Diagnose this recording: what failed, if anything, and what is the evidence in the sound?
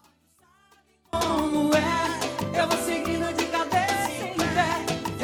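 One channel inverted, from 0.0 to 1.13 s: the summed sound falls by about 35 dB to a faint residue, then full level returns. The likely cause is reversed polarity in analogue wiring, so content shared by both channels cancels in mono.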